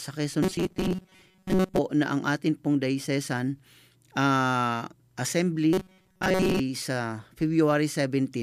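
From 0.43 to 1.79 s, and again from 5.73 to 6.60 s, the speech turns into a rigid, metallic buzz pitched at 188 Hz: robotic sound from repeated short buffers. This is likely new audio arriving too slowly, so playback loops a fragment of about 5.3 ms, which sets the fixed pitch. Most of each stretch is this repetition rather than real signal, so the words survive only as a rough outline under the buzz.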